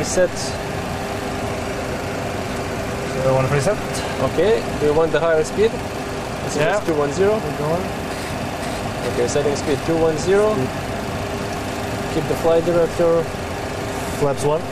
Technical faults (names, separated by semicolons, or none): processor overload crackle